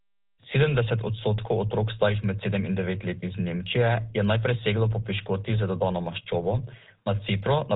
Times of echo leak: none

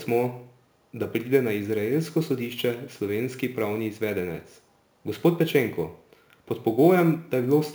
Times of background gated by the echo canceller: none

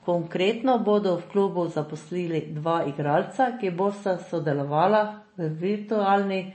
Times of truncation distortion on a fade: none

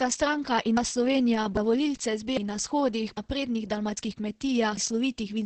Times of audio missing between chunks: 1.57, 3.17, 3.97

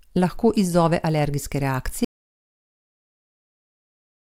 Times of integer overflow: none

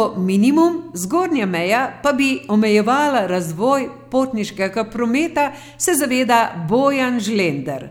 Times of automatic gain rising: none

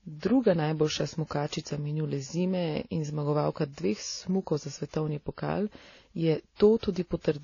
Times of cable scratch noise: none

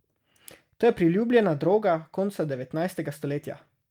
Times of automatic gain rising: none

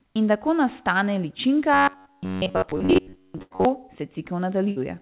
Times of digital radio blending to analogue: none

